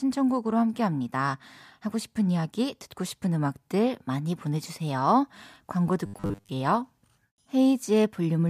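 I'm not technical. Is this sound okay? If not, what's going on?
No. From about 6.06 to 6.50 s, the voice turns into a flat, metallic buzz: robotic sound from repeated short buffers. The likely cause is that new audio arrived too slowly, so the playback kept repeating the same tiny slice, about 10 ms, skipping most of the real sound. Those fast repeats create a fixed 100 Hz drone. Unlike a dropout, the sound never goes silent, and unlike an echo, you can't hear separate copies.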